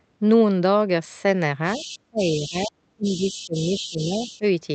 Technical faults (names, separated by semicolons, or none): other side's voice leaking through; speech suppressed in double talk